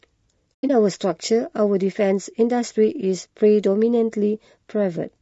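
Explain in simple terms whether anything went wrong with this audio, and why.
Yes, two things. The speech sounds rough and grainy throughout, with a thin, artificial top end, likely from low-delay AAC compression squeezing it too hard. Around 0.55 to 0.70 s there's AAC frame loss with muting: the audio fades out into soft gaps, the longest about a tenth of a second, where chunks simply went missing.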